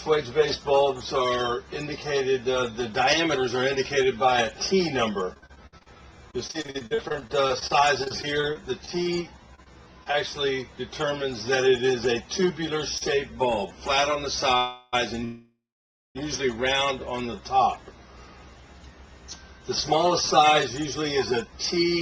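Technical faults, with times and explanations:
5.33–10.15 s, repeated packet loss (robotic sound): 35 gaps come one after another, the longest 57 ms. About 840 ms gets patched by carrying the last sound forward and 680 ms is simply gone, so it turns choppy, with chunks missing.
12.98 s, short stall from a late packet: one packet shows up late, the jitter buffer empties, and the last sound is held for 33 ms until it lands. Nothing is lost, but there's a brief stretched moment with a faint buzz or dip.
14.57–14.95 s, call audio freeze: the last sound is carried on for 353 ms as a fading buzz or hiss with no silence, then picks up where it left off. That's likely packets held up in transit draining the buffer, so there's a gap but no missing material.
15.25–16.17 s, call audio freeze: a longer hold of 904 ms. The continued sound fades and then sits silent for 570 ms before the audio resumes from the same spot. 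Again nothing is lost, just a pause pushed into the stream.
16.99–17.42 s, jitter buffer slow-down: the receiver rebuilds its reserve by repeating single pitch periods, adding 48 ms. For that stretch playback runs at about 91% speed at the same pitch, so things sound drawn out.
20.04–22.01 s, jitter buffer speed-up: the buffer is holding more than it wants, so the receiver trims short pitch-period pieces, roughly a tenth of a second in total. Playback runs at 105% speed with unchanged pitch, which makes the end feel a little hurried.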